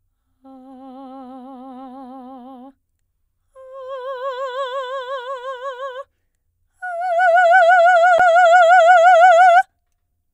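At 8.18 s the music has a CD skip. The laser jumped to another turn of the disc's spiral, most likely after a knock or a surface flaw. The player muted very briefly, for roughly 10 ms, then resumed reading from a different point on the disc. It sounds like a small tick followed by an abrupt jump in the music. The playback lands somewhere else rather than continuing smoothly.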